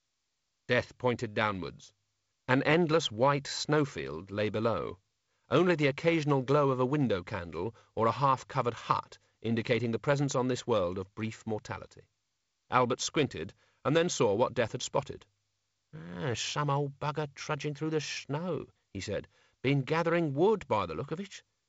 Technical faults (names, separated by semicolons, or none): none